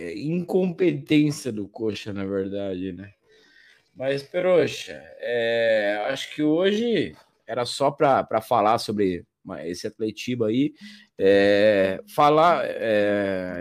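From 0.0 to 6.9 s the speech runs as a time-stretched section, slowed to about 0.63 of its natural pace while the pitch stays put. The cause is likely software lengthening this stretch to fit a duration, repeating short slices to hold the pitch. At 6.9 s, just before "era só para falar", the pace jumps back to normal. A spectrogram shows syllables drawn out along time with harmonic spacing unchanged.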